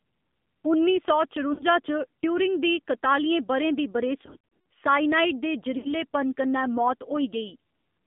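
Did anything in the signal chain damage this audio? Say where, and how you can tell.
Yes. AMR narrowband mobile codec throughout, at the codec stage: the audio is confined to about 150 Hz–3.6 kHz and sounds buzzy and synthetic, which fits a low bitrate near 7.4 kbps.

Lost AMR speech frames at 1.54–1.63 s, 4.26–4.65 s and 5.78–5.92 s, a network fault: the decoder repeats the last pitch and tract settings with fading gain, giving warbles and dips.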